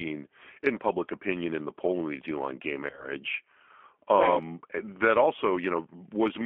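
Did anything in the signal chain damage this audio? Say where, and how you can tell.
Yes. At the codec stage, the whole clip carries G.729 codec damage: speech sounds rough and synthetic, which fits an 8 kbit/s G.729A encoder. On a spectrogram, energy sits only between about 250 Hz and 3.4 kHz, with smeared harmonics from the pulse-based excitation model.

At the network stage, there is VoIP packet loss concealed by the speech codec from 2.90 to 3.08 s. About 50 ms of audio went missing across an 80 ms stretch, in runs of at most 20 ms. The decoder filled the gaps by extending its last pitch and filter, producing buzzy, fading fragments. On the waveform these show as dips in amplitude. On the spectrogram they appear as flattened, repetitive harmonics, with the speech staying weak briefly afterwards.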